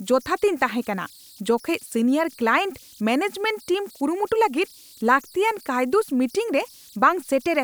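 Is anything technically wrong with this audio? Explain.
Yes. Converter idle tones run throughout the clip. An undithered delta-sigma converter locks into repeating bit patterns at low input levels, producing tones around 4 kHz heard as whistles, buzzy chirps or rough hiss in the pauses, plus grainy noise under quiet speech, about 29 dB below the signal.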